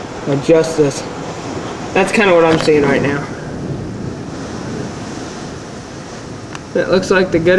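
No technical faults are audible.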